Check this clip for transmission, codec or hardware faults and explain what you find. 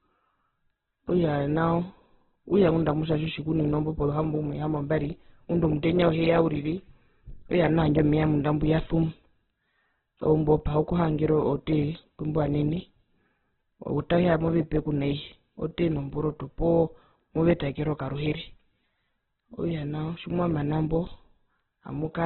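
One codec fault runs through the whole recording.

Opus compression, throughout: The speech has nothing above 4.2 kHz, and its tone is heavily roughened, most likely by Opus in its music (CELT) mode at a very low bitrate, around 8 kbps. With so few bits, the encoder keeps each band's overall energy but fills its detail with copied lower-band content or noise. That leaves the speech grainy and rough rather than swirly, and the narrowband cut-off makes it sound muffled and telephone-like.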